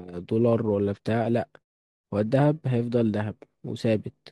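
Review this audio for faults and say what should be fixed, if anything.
Nothing in this speech needs fixing. The pauses fade to silence, the background drops out there, and the sound returns in time for the next speech, with only very quiet sound lost.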